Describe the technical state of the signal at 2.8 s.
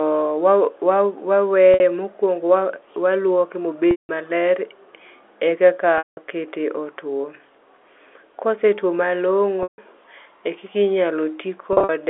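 At 2.8 s the speech is intact, with no fault present, heard through a narrow telephone band of about 300 Hz to 3.5 kHz that fits standard G.711 telephone coding.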